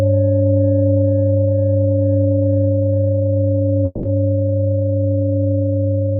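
A long network dropout likely starves the receiver of audio from 3.85 to 4.05 s. It stretches the last sound into a fading buzz for about 180 ms, never falling to silence, then the audio resumes with that 180 ms missing.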